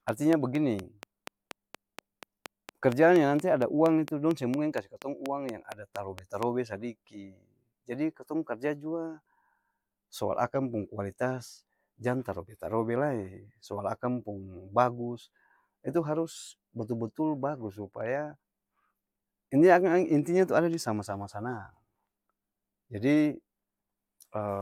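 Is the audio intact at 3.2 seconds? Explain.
No. A train of clicks runs from 0.09 s to 6.44 s, so 3.2 s falls inside it. Short, near-identical pulses arrive at a steady 4.3 per second, around thirty in all, most likely from interference by nearby equipment or a faulty connection or power supply injecting the same spike repeatedly. Each click rises to roughly 15 dB above the speech, so a regular ticking sits on top of the talking and carries on through the pauses.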